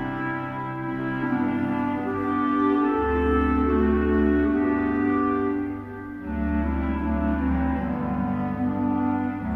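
Nothing stood out as a technical problem on listening to this clip.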